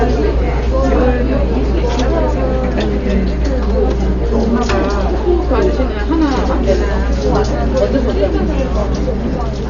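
From start to end, nothing sounds above 7 kHz, so the audio is dull. Tones carry a rough, fluttering noise. This is likely Dolby Digital compression at a very low bitrate, around 40 kbps. The encoder cut the band and starved many frequency lines, which the decoder filled with noise.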